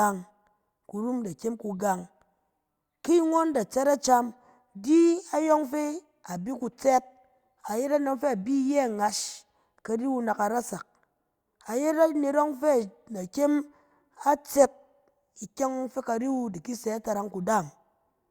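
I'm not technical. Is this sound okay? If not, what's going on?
Yes, the recording's technical signal is in good order, with nothing going wrong at any point along the way.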